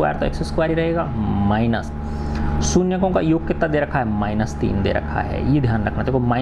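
Nothing stood out as a technical fault on listening to the audio.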